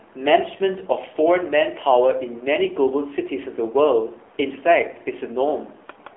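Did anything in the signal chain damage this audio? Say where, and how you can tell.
Yes. The damage sits at the codec stage and runs through the whole clip: this is the AMR narrowband mobile codec, AMR-NB. The speech has nothing above 3.6 kHz, sits in a telephone band of roughly 300 Hz to 3.5 kHz, and carries a plainly audible buzzy, synthetic quality. That fits a bitrate near 7.4 kbps. At that rate the vocal-tract model is driven by very few pulses per 5 ms subframe, so the fine detail of the voice is replaced by a coarse approximation.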